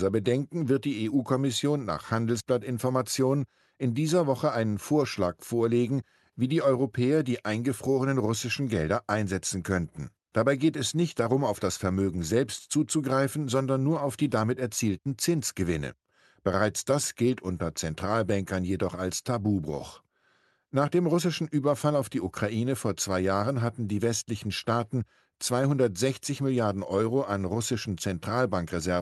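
Nothing in the speech recording stood out as a technical problem on listening.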